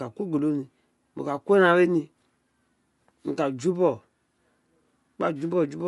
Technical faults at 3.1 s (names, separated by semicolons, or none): Bluetooth LC3 compression